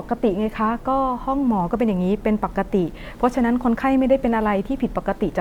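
Nothing is technically wrong with this speech recording.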